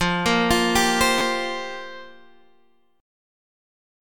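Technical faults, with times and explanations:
1.18–1.21 s: repeated buffer. An 11.6 ms block, which fits a 512-sample buffer, replays twice with hard joins when new audio arrives late, giving a brief buzzy stutter.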